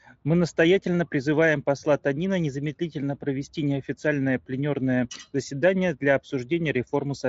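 Nothing stood out on listening to this speech recording.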